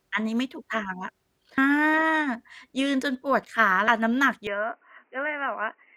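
A recorder working in 2.5-second chunks likely drops audio at each handover, leaving audio missing between chunks at 1.58 s and 3.88 s. Around a fifth of a second vanishes each time, and the two sides butt together, so the speech jumps abruptly forward.

At 4.47 s the input likely switched to a poorer device. The new path passes nothing above 3 kHz, so the speech turns dull and boxy instantly, with no silence at the change, drops about 5 dB in level, and gains background noise roughly 40 dB down.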